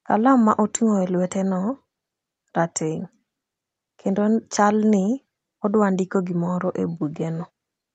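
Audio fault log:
No fault to log for this audio.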